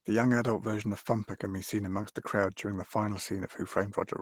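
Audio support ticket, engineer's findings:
Opus voice compression throughout the speech. Encoder running lean, which fits a bitrate around 16 kbps. SILK linear-prediction core codes the lower band with coarse excitation; the sparse top band points to a thin CELT layer in hybrid mode. Result: plainly audible damage, speech muffled, hoarse and slightly robotic.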